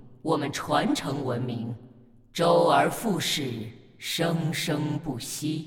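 No audible technical faults occur anywhere in this audio.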